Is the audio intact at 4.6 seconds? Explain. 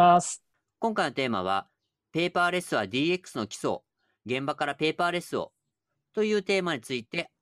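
Yes, the speech at 4.6 s plays through intact, with no fault at that moment.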